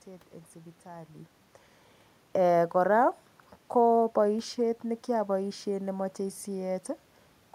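Nothing stood out as a technical fault on listening.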